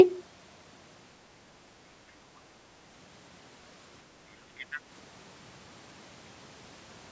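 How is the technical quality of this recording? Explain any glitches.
The recording has one glitch: other side's voice leaking through, from 4.58 to 4.8 s. For about a fifth of a second, a second, much fainter voice sits underneath the main speech, roughly 25 dB quieter. The likely cause is that the call's echo canceller failed to fully remove the far end's loudspeaker sound from the microphone signal. This differs from room reverberation, which trails the talker's own voice. Here the faint fragment is a different voice. The call microphone processing itself is audible in the band ending at 8 kHz.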